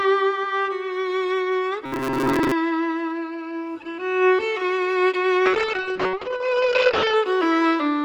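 From 1.86 s to 2.52 s the sound turns into a rigid, metallic buzz pitched at about 134 Hz: the robotic sound from repeated short buffers. The likely cause is audio arriving too seldom, so the playout side fills the gaps by looping the most recent short segment while the real audio is skipped. A 134 Hz buzz fits a segment of roughly 7.5 ms, and most of the span, around two-thirds or more, sounds like repetition rather than new material.

From 5.46 s to 7.21 s there is a call bitrate drop. The sound loses its top end, with the upper limit falling from 12 kHz to 8 kHz, and it becomes coarse and watery for about 1.7 s before the detail returns. This degradation points to the encoder being told to fall from around 32 kbps to roughly 7 kbps. At that rate, Opus on this WebRTC call path quantises much more coarsely and narrows its bandwidth.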